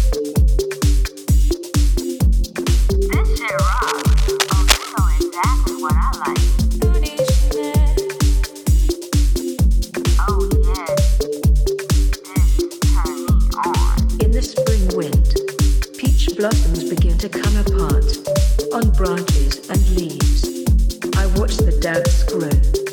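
From 3.66 to 4.93 s, cable scratch noise sits roughly 10 dB below the sound as a rough, rustling scrape. It is likely caused by a worn cable or connector whose contact resistance flickers as it moves. A spectrogram shows dense, ragged broadband streaks, and the waveform carries jagged, uneven spikes.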